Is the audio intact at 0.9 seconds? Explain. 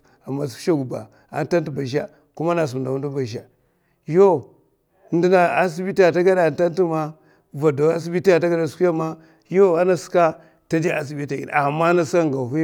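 Yes, at 0.9 seconds the speech is intact, with no dropout, click, distortion or other technical fault to be heard at that moment.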